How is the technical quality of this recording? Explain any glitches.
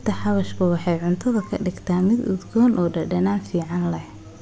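The recording has one glitch. From 1.5 to 3.75 s, the resampler restarts on every block. Each 250 ms block is converted without its neighbouring samples, leaving an error at every edge, heard as regular ticks at 4 Hz under the speech.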